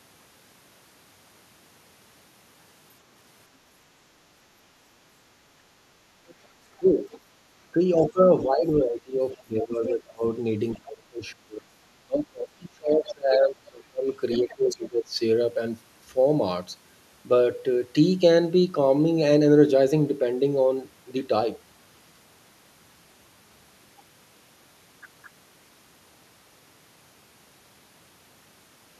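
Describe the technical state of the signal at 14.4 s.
At 14.4 s the talker is caught in speech suppressed in double talk, which runs from 7.73 to 15.2 s. With both ends speaking, the echo canceller likely failed to tell near speech from loudspeaker echo and attenuated everything, so the voice dips and fragments, by about 25 dB at worst, over roughly five seconds in total.

Overlapping this, from 14.32 to 14.79 s, the other side's voice leaks through, a faint second talker roughly 15 dB under the main speech. This is likely residual loudspeaker echo the canceller left in the microphone signal.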